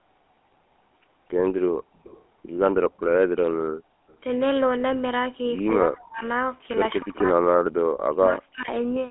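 A speech recording carried over a GSM full-rate codec throughout, giving the gravelly, buzzy texture typical of its pulse-driven vocal-tract model at a rate consistent with 13 kbps. The sound sits in a narrow telephone band of roughly 250 Hz to 3.4 kHz, with nothing above 3.8 kHz. From 5.82 to 6.23 s and again from 8.08 to 8.7 s the speech drops sharply, by something like 40 dB, across most of each span. This is likely speech suppressed in double talk, where an echo canceller, unable to tell the near talker from loudspeaker echo, attenuates both. Between 7.59 and 7.72 s the room background is gated by the echo canceller, falling by about 40 dB for roughly a tenth of a second while the far end plays, then returning once the canceller releases.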